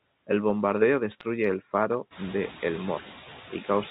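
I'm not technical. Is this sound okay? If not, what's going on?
No. A noise suppressor is running through the whole recording, turning down whatever it takes for steady background noise a moment at a time. The noise dips between words and swells beneath them.

From about 1.11 to 1.26 seconds, there are bit errors on a digital phone line: tiny pieces of the signal were flipped in transit, each spoiling a single instant of sound. You hear this as a brief disturbance over the speech, which stays unchanged underneath. The room's own background noise also gets louder around 2 seconds.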